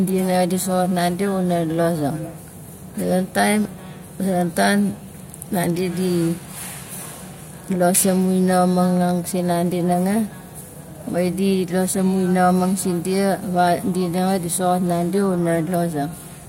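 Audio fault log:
No faults heard anywhere in the speech recording.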